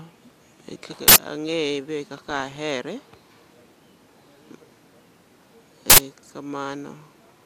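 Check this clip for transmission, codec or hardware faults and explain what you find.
The clip has an uninitialised buffer fault, heard twice. It occurs from 1.08 to 1.16 s and again from 5.90 to 5.98 s. Each burst lasts 80 ms. A block of audio was sent to the output before any samples were written into it. Whatever data sat in that memory was played as sound. The result is a short, loud blast of harsh digital noise cutting through the speech.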